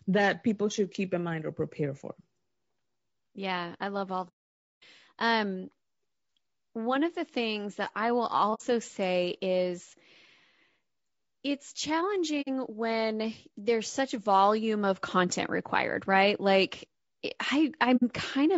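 Throughout, the speech sounds rough and grainy, with noise between harmonics and a thin top band, likely from low-delay AAC compression (AAC-ELD) at 32 kbps. AAC frame loss with muting leaves soft-faded holes. The first, from 4.28 to 4.83 s after "yeah i love all", lasts 0.54 s. Three shorter holes of about 60 ms each follow at 8.54 s after "things that i will", at 12.41 s before "when there's such volume", and at 17.96 s.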